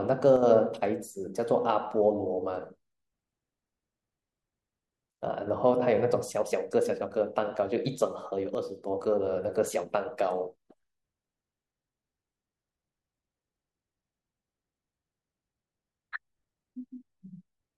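One channel likely drops out from 0.36 to 0.43 s and from 8.55 to 8.87 s, so the speech abruptly falls about 6 dB each time.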